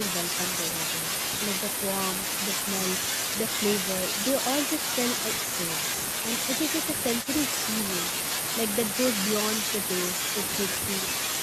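No technical faults occur at any point in the speech.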